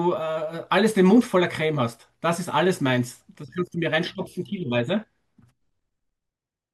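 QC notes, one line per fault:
Nothing to flag on this one; I listened all the way through and didn't hear anything wrong.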